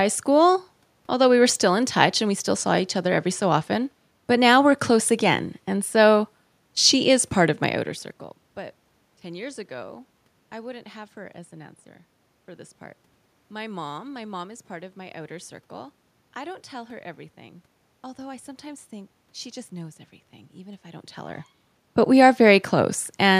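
No technical faults are audible in the speech signal: the background noise belongs to the room itself, and the level shifts around 7.5 s and again near 21 s come from the talker moving relative to the microphone.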